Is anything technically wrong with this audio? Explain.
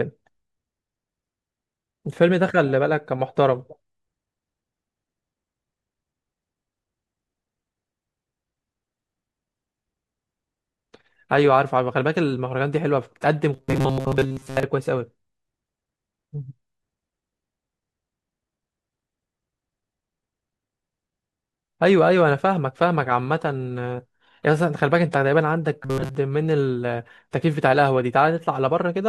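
Yes. From 13.54 to 14.64 s, and again briefly from 25.83 to 26.15 s, the speech collapses into a rigid metallic buzz pitched at 133 Hz, still loosely tracing the syllables. This is robotic sound from repeated short buffers: audio is likely arriving too seldom, so the playback keeps looping a fragment of about 7.5 ms to fill the gaps while most of the real signal is skipped. That looping imposes the fixed buzz.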